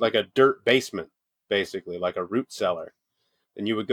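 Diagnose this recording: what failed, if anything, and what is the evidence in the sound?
Nothing failed in this recording, and the sound holds no evidence of a fault at any stage.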